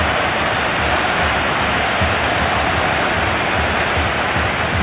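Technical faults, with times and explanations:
Nothing here needs flagging; I couldn't pick out a single technical fault anywhere in the recording.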